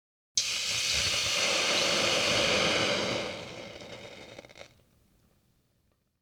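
No technical faults can be heard anywhere in this audio.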